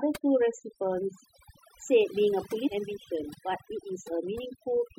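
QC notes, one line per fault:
Throughout: overdone noise removal. The noise reduction was set too strong, so frequency bands near its noise estimate are pulled far down or shut off, taking quieter parts of the speech with them. The background drops and breaks up into twinkling specks.
2.66–2.68 s: stream segment skipped. The audio jumps abruptly ahead with a small blip, as if part of the programme is simply absent. The likely cause is one segment of the stream failing to load, with playback carrying straight on into the next segment.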